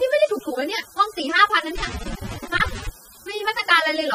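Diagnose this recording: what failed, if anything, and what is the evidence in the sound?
Low bit depth with dither at the sample-format conversion: a constant, even hiss sits roughly 20 dB under the speech, with no distortion. That's what a 7-bit signal with dither sounds like.

The codec stage shows plainly audible damage. There's nothing above 15.4 kHz, and the speech is dull and smeared, so likely AAC compression at a low bitrate.

Loose connector crackle in the analogue wiring runs from 1.76 to 2.89 s. It's an irregular burst of scratching as a dodgy contact makes and breaks.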